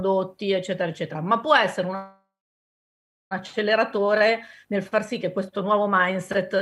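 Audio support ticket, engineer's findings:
Fading buzz at 1.95 s, about 1 s silence, resumes intact at 3.33 s. Call audio freeze: likely jitter buffer ran empty on held-up packets.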